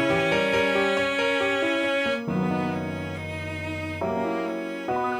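From start to finish a steady USB whine sits under the sound, a fixed-pitch tone at 1 kHz, roughly 30 dB below the programme level. It comes from the USB bus drawing current in regular 1 ms frames. That periodic load couples into the audio path through shared power or ground, so the 1 kHz frame rate appears directly as an audible tone. It does not drift or waver, which marks it as interference rather than acoustic noise.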